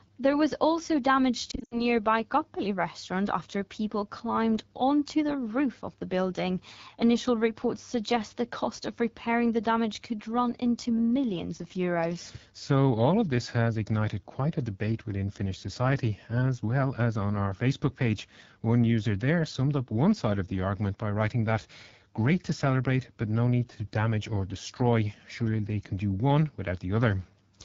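The whole clip passes through the AMR wideband (HD Voice) codec at 8.85 kbit/s, one of its two lowest rates, where the pulse-driven vocal tract model is starved of bits. The speech is plainly damaged throughout, with a rough, raspy texture.

From 1.51 to 1.84 s, just after "was also damage", lost AMR speech frames failed their checksum and were concealed by reusing the last good settings with falling gain. About 140 ms is lost, scattered over 200 ms, which fits seven 20 ms frames. The longest run, 80 ms, sinks to near silence, and the speech returns weak or rough.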